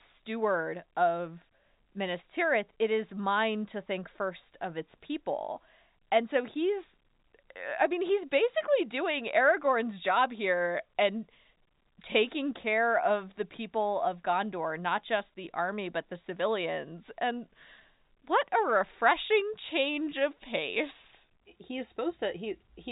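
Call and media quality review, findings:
Nothing to flag on this call leg; it's ordinary G.711 telephone audio with the usual 4 kHz ceiling and a faint level-following hiss underneath.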